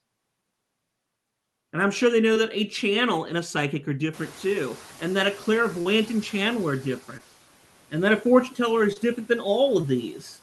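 At 2.33 s comes the first short concealed packet loss: about 20 ms of the stream never arrived, and the receiver papered over it by extending the preceding sound, leaving a brief smear or wobble. On a spectrogram this appears as a thin column where harmonics run on unnaturally flat or turn into diffuse noise, with no true silent gap. In the waveform it looks like a few repeated, slightly smoothed cycles.

Just after "and a psychic are", at 4.13 s, the room's background noise jumps by about 24 dB, and the noise suppressor is caught catching up. For roughly 2.8 s, until 6.93 s, the noise comes through with less reduction, then sinks by about 6 dB as the suppressor's estimate adapts. A spectrogram shows a brightened noise floor across the band that gradually darkens. The waveform's baseline between syllables visibly thins over that stretch.

Inside that stretch, at 5.81 to 5.87 s, a longer loss of about 40 ms is concealed. 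It is a longer wobble, and a short consonant may be swallowed. Its spectrogram patch is wider and blurrier than the others.

Similar ~20 ms concealed losses follow at 7.17 s, at 8.93 s between "that a fortune teller" and "different than", and at 9.81 s just after "different than". Each is a brief smear with the same short, smoothed-over spectrogram column.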